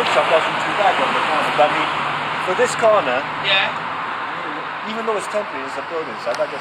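Nothing stood out as a technical fault when listening to the recording.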